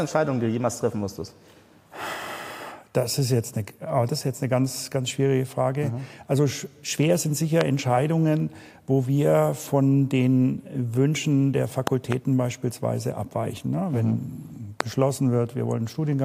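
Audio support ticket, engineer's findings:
Loud pop at 7.61 s, a double pop across 11.87–12.14 s, another at 14.81 s, peaking around 20 dB over the sound. Likely a voltage step from a plug, switch or static discharge, shaped downstream into a thump. Audio continues underneath, unlike a dropout.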